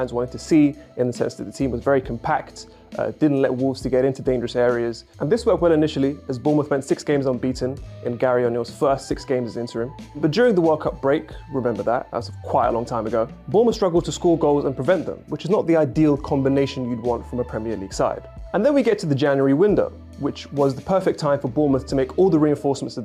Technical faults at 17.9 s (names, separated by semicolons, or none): none